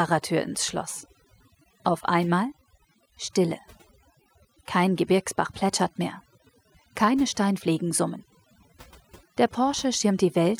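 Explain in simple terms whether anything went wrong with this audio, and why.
Something did go wrong here: overdone noise removal, from start to finish. A noise-cleaning tool was cranked too high, so it kept shutting off slices of sound it took for background hiss, quiet bits of speech included. The background breaks up into twinkly, warbly specks.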